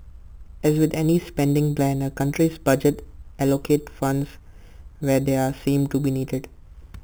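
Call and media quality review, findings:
Imaging from sample-and-hold upsampling, throughout. Resampler repeating samples with no interpolation filter, consistent with an 8 kHz to 48 kHz conversion. Mirror copy of the speech band from 4 kHz to 8 kHz, about 21 dB below signal, plus higher copies. Bright metallic fizz that tracks speech level and moves opposite to pitch.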